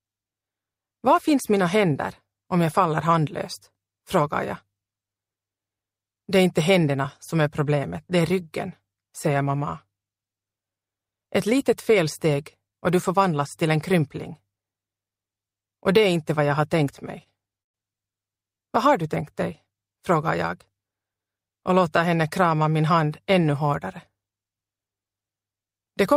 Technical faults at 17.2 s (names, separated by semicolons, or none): short stall from a late packet